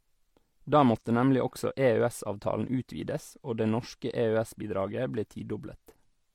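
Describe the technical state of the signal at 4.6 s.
At 4.6 s the speech carries the same mixed coding damage heard across the whole clip. It sounds like transcoding between lossy codecs, likely an MP3 pass followed by HE-AAC at low bitrates, around 58 and 48 kbit/s. The second encoder spends bits re-coding the first one's artefacts and adds its own. The two codecs' artefacts are heard together. Nothing remains above 17.3 kHz.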